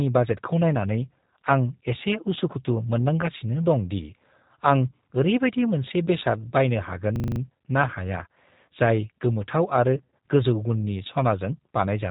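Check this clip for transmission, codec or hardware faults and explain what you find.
Three kinds of fault show up in this speech clip: a low-bitrate codec running the whole way through, two patches of packet loss, and one short hang loop.

G.729 codec, throughout: the sound has that slightly rough, synthetic edge and nothing above 4 kHz, which fits G.729A at 8 kbit/s. It rebuilds speech from a vocal tract filter, a pitch predictor and a few pulses per frame, so the damage is plainly audible but the speech stays intelligible.

VoIP packet loss concealed by the speech codec, at 3.22 to 3.26 s and 9.97 to 10.03 s: the first is tiny and sounds like about 10 ms of audio went missing. The second is worse, with around 90 ms lost in short gaps spread over roughly 160 ms, the longest about 30 ms. Each time the decoder stretches its last pitch and filter into a fading buzzy tone or coloured noise, and the voice stays a bit weak and distorted for a moment afterwards.

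System hang loop, 7.16 to 7.40 s: the system stalled while the sound hardware kept replaying the same 40 ms of buffer, six times over. At 25 Hz that reads as a fast stutter, almost a buzz. Hardly any audio is lost. The same slice just repeats.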